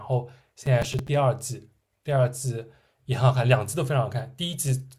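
Speech with processor overload crackle, 0.66 to 1.09 s: repeated missed deadlines, fitting roughly 5 ms buffers, replay stale audio as gritty tearing, unlike a single dropout.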